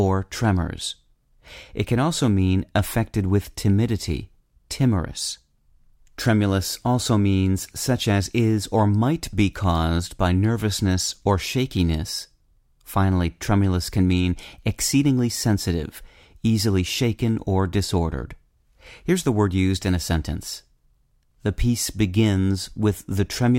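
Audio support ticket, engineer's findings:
Single sharp click at 15.19 s, just before "sensitive easily shaken or". Likely dropped samples: a fraction of a millisecond missing, waveform jumps to a later value. No audible gap or lost sound, which separates it from a dropout.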